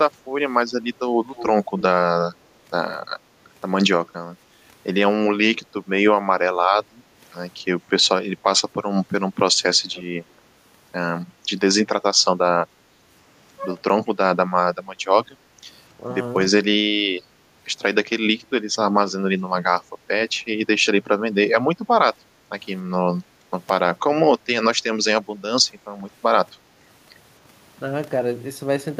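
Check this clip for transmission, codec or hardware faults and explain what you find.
The clip contains three kinds of echo-canceller fault, all in speech.

Echo leak: at 1.34–1.82 s, 9.94–10.02 s and 18.42–18.47 s, a delayed copy of the speech follows itself by about 276–286 ms. It is about 10, 20 and 40 dB down respectively. The likely cause is residual loudspeaker pickup passing the canceller. On a spectrogram it appears as a weaker, time-shifted duplicate of the harmonic pattern.

Background gated by the echo canceller: at 6.89–7.17 s and 22.28–22.46 s, the room tone dips by about 6 dB for roughly 300 ms and 150 ms. The canceller clamped the microphone while the far end played. The waveform shows a brief flattening of the noise floor, and the spectrogram a short, lighter band.

Speech suppressed in double talk: at 21.76–21.80 s, 23.40–23.44 s and 25.17–25.22 s, the speech briefly ducks by about 10 dB for 40–50 ms. 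Overlapping talk likely confused the canceller, which attenuated both. These show as small notches in the waveform envelope, with faded energy across the spectrogram.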